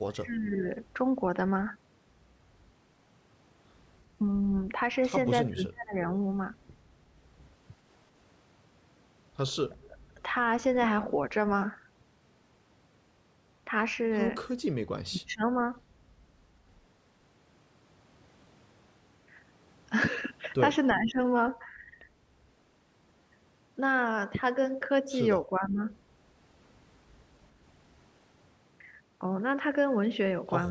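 The speech dips sharply at 0.13–0.66, 5.44–5.95, 9.7–10.2, 15.07–15.69, 20.95–21.19 and 25.5–25.8 s, by up to about 30 dB. This is likely speech suppressed in double talk, with the echo canceller pulling the talker down along with the echo.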